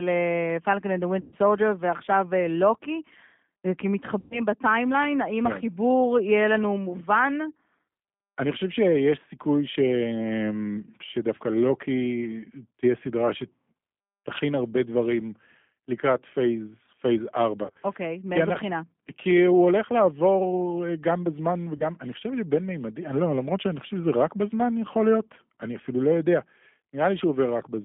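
The G.729 codec runs throughout the speech, at 8 kbit/s on a 150 Hz to 3.5 kHz line. Each 10 ms frame is rebuilt from a vocal tract filter, a pitch predictor and a few pulses, so the audio sounds plainly rough, synthetic and band-limited.

VoIP packet loss concealed by the speech codec strikes at 1.21–1.35 s, 4.19–4.40 s, 17.65–17.78 s (scattered, longest gap 40 ms) and 21.77–21.90 s. The decoder stretches its last pitch and filter into a fading buzzy tone or coloured noise, leaving weak, smeared sound before recovering.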